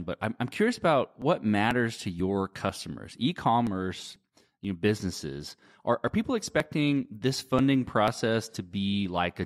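From 0.24 s to 9.06 s the speech is interrupted by periodic USB or driver dropouts every 0.49 s, about twenty in all. At each stall roughly 10 ms of audio is skipped outright, producing a regular tick that is audible wherever signal is present.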